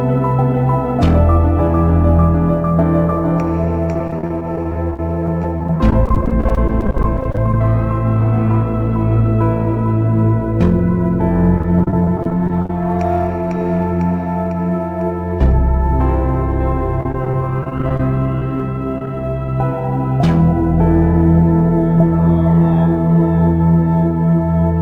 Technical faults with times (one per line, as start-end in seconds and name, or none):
0.00-24.81 sample clock jitter
3.91-7.54 repeated packet loss (robotic sound)
11.58-12.70 repeated packet loss (robotic sound)
17.01-18.00 repeated packet loss (robotic sound)
18.39-18.60 short concealed packet loss
18.98-19.11 short concealed packet loss